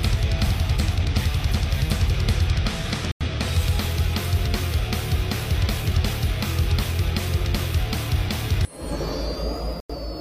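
Corrupt frames were muted twice: damaged compressed frames were rejected by the decoder and the player filled their slots with silence. The audio drops out abruptly at 3.11 s for about 0.15 s, and again at 9.79 s for about 0.15 s. Each gap's length fits a run of a few consecutive lost frames rather than a single one. The surrounding sound carries on in step, because each silent stretch occupies exactly the missing frames' time.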